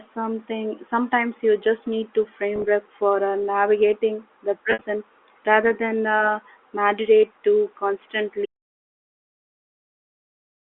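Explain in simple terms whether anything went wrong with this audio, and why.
Two problems can be heard. The first is packet loss with pitch repetition. At 2.56 s, right after "you just need to", small pieces of the signal go missing, and the receiver fills the gaps by repeating the last bit of voice, so the sound briefly holds with a slight buzz. At 4.71 s, after "for uh navigating the", a longer stretch is lost, so the repetition fades toward quiet before the speech returns.

The second is an audio dropout to silence. From 8.46 s until the end, the sound stops completely, with no background hiss at all. Unlike the packet loss, nothing is repeated to cover the gap. The input was most likely lost, perhaps through a disconnected device or a mute.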